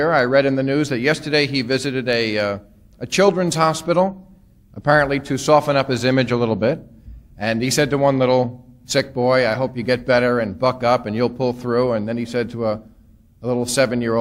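No technical fault can be heard anywhere in the sound; the signal stays steady and intact over its whole duration.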